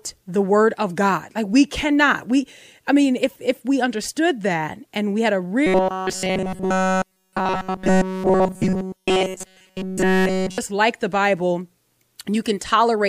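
Speech clip with robotic sound from repeated short buffers between 5.67 and 10.58 s, after "and we had a" and before "like the". The voice becomes a rigid metallic buzz at 188 Hz throughout this stretch. Likely cause: audio arrived too seldom, so a roughly 5.3 ms buffer was looped while real audio was skipped.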